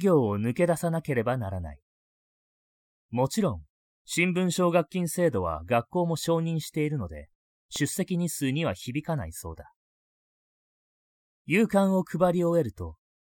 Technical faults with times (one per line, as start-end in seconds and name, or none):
7.15-7.88 CD scratch ticks